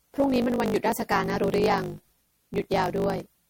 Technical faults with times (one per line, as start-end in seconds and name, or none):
0.00-3.50 block size mismatch (truncated)
0.00-3.50 generation loss